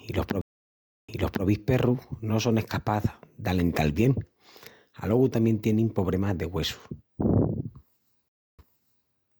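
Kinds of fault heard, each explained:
Stream reconnect: the connection dropped, so the player went quiet, re-established the link and started a new decoder partway through the stream, with the server resending a burst of earlier audio. Right after "i los" at 0.41 s the speech cuts to about 0.67 s of silence, then resumes 0.38 s earlier, repeating material. At 8.28 s a shorter gap of about 0.30 s occurs, and playback picks up 0.5 s back.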